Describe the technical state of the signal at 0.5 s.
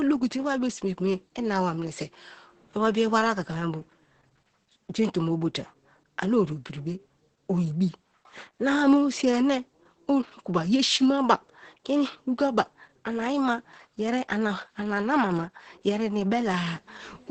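At 0.5 s the speech carries Opus voice compression, present across the whole clip. The SILK predictive coder, at a rate that fits roughly 10 kbps, codes the excitation coarsely, giving a hoarse, slightly robotic texture. That grain, not just the dullness of the 8.7 kHz ceiling, distinguishes it from simple low-pass filtering.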